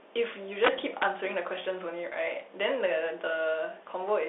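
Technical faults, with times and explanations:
Throughout: Bluetooth CVSD headset codec. The sound is confined to about 300 Hz to 3.6 kHz with nothing above 3.8 kHz, and a granular hiss and scratchy sibilants set it apart from simple filtering.
0.64 to 1.03 s: integer overflow. Peaks about 4 dB over the limit wrap to the opposite sign, producing violent cracks far harsher than flat-topped clipping.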